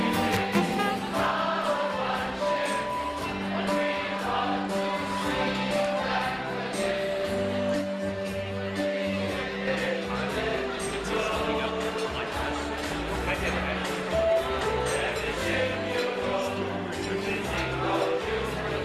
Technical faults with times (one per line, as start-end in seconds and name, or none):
7.81-9.67 channel delay (comb filtering)